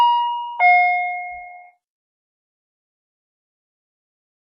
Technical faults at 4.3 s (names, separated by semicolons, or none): adaptive stream at a lower bitrate